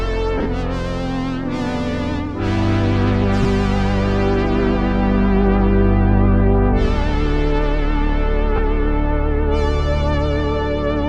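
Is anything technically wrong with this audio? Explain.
Yes. There are lost LE Audio frames in three places. Parts of the Bluetooth LE Audio stream never arrived, so the LC3 decoder filled each gap by repeating the last good spectrum with randomised signs. The first and worst spot runs from 0.38 to 0.46 s. About 52.5 ms are missing, scattered across 75 ms, with the longest run around 30 ms. Shorter gaps follow at 3.43 s (15 ms) and 8.56 to 8.59 s (22.5 ms). These lengths fit 7.5 ms frames. Each one is heard as a brief noisy smear in place of the real sound.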